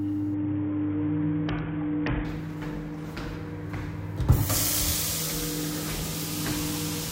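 From 0.34 to 2.25 s there's a Bluetooth SBC bit pool drop: the link starved, treble dulls and grit creeps in, which fits a bit pool falling from 31 to 6, around 55 kbps.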